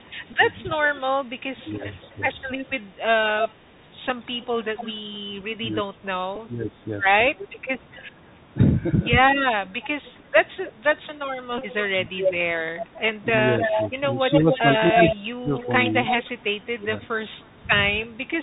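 A granular hiss sits under the speech for the whole clip, with scratchy s sounds, loud bright passages that smear and distort, and nothing above 4 kHz. This is the Bluetooth CVSD headset codec: one bit per sample at 64 kHz, with an adaptive step that cannot keep up with fast, loud high-frequency movement.

From 0.0 to 4.93 s a faint delayed copy of the speech trails the original by about 0.29 s, well below the direct sound. It returns briefly at 7.4 s, and from 9.82 to 18.06 s it is about as loud as the speech itself, trailing by 0.3 s. This is echo leak, likely from a far-end loudspeaker whose echo canceller let part of the microphone pickup back into the call.

Small ticks occur at 0.33 s, 4.09 s and 6.36 s, and a short burst of buzzy roughness runs from 11.58 to 11.62 s. This is a Bluetooth headset packet repeated: lost 3.75 ms voice packets were replaced by the previous packet's bits, and a run of repeats produces a brief buzz near 267 Hz.

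The speech dips or thins in patches between 1.63 and 3.78 s and between 5.6 and 6.81 s, falling by up to about 15 dB. A lighter dip follows at 11.9 to 12.1 s. Between 13.62 and 15.52 s the speech drops out in places, by up to about 30 dB, and from 16.81 to 18.19 s it dips by about 10 dB. This is speech suppressed in double talk, likely an echo canceller turning down the talker while the other side spoke.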